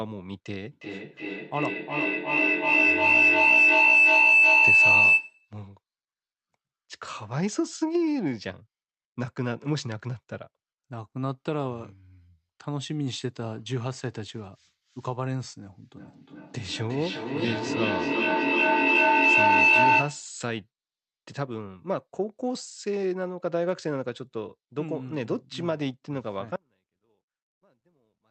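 Speech carried over an Opus call path has three faults. From 0.72 to 5.51 s a feedback howl builds near 3 kHz, pulsing about every 0.4 s and peaking about 10 dB above the speech. It is a sustained tone rather than repeated words, because the microphone-to-loudspeaker loop gained level on each pass. From 15.97 to 20.36 s the fault is feedback echo between two devices. Each phrase returns at roughly 0.4 s intervals, thinner and more ringing, and the repeats pile up to about 9 dB above the speech. Unlike the howl, the words stay recognisable and do not collapse into one pitch. From 26.56 s to the end, the audio drops out to a faint residue about 35 dB below the signal. The cut is abrupt, unlike a pause or fade, and likely comes from losing the wanted signal while the path stayed live.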